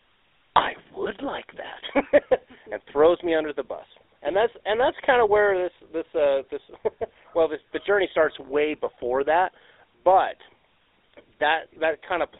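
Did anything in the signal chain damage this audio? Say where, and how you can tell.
Yes. At the codec stage, the GSM full-rate codec runs throughout the speech. The band sits within 300 Hz to 3.7 kHz, and the buzzy, gravelly roughness from the decimated pulse excitation fits a 13 kbps stream. That texture sets it apart from plain telephone band-limiting.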